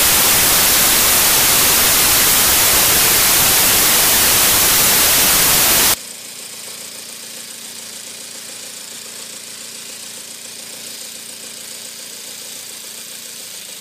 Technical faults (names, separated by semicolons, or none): samples built from the wrong bytes